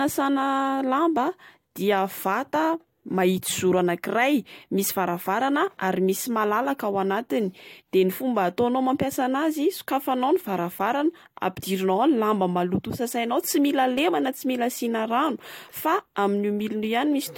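No technical faults are audible.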